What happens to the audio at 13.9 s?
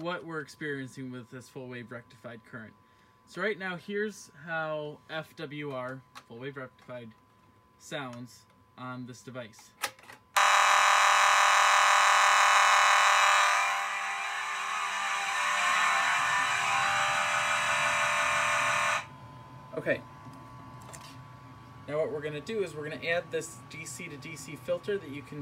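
Nothing goes wrong at 13.9 s; the audio there is intact, with no dropout, click, distortion or other fault.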